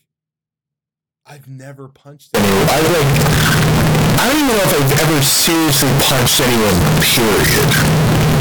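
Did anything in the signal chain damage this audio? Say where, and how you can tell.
Yes. A signed and unsigned mix-up takes over from 2.35 s to the end of the speech clip, at the sample-format conversion stage. The sound turns into a loud, harsh, clipped-sounding roar, and pauses become as loud as the speech, so the quiet passages disappear. That points to the likely cause: 16-bit samples read with the wrong sign convention, which flips the top bit and turns every zero crossing into a full-scale jump.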